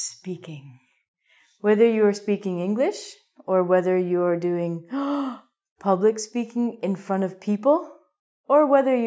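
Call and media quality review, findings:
No findings: no call or media quality faults heard in this clip.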